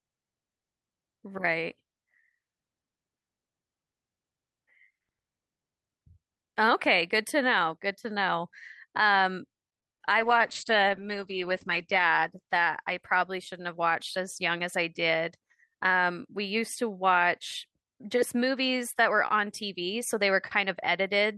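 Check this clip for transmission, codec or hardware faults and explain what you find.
Two transmission faults occur back to back in the middle of the speech.

From 9.69 to 10.10 s there is repeated packet loss, giving a robotic sound. The stream kept losing or receiving late audio, opening five short holes, the longest about 25 ms. Each hole was filled by stretching the preceding sound, so roughly a quarter of that stretch is synthesized. The result is choppy and robotic, with fragments of the speech missing or smeared.

From 10.21 to 14.35 s there is a call bitrate drop. The connection's bandwidth estimate collapsed, and the encoder was forced to spend far fewer bits. The sound points to a fall from around 64 kbps to about 10 kbps, holding at its worst for 1.6 s. The codec responded by coding coarsely and narrowing the audio band from 20 kHz to 8 kHz. The speech therefore turns dull, rough and watery until quality returns.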